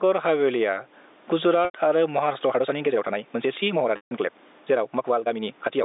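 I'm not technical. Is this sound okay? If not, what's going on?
No. Throughout, loud and soft parts end up closer together in level, and the sound is squashed. This is gain pumping, likely from the level being set too high and an automatic limiter keeping pulling it back down.

At 1.65 s and again at 3.96 s, the sound briefly holds on a buzzy note, fades into silence, and the speech returns with a short cross-fade. This is packet loss with pitch repetition: bits of audio went missing and the system replayed the last sliver to fill gaps of about 0.09 and 0.15 seconds.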